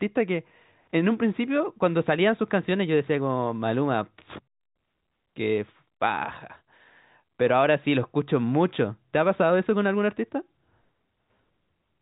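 Nothing stood out on listening to this speech, which comes through the narrow telephone band of G.711 coding with nothing audible above roughly 3.8 kHz.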